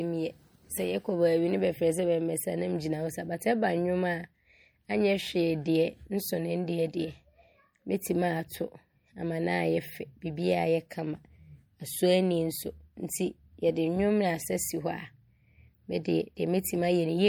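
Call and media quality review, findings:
Speech throughout, plainly audible swirly, watery texture on sibilants, smeared consonant onsets. Likely MP3 compression at a low bitrate, consistent with roughly 64 kbps, starving weak frequency lines. Steady across the clip, unlike bursty packet-loss concealment.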